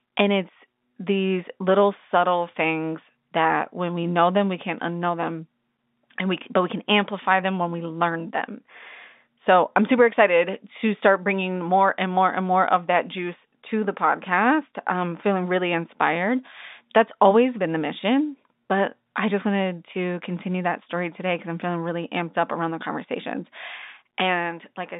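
No technical faults can be heard in this speech.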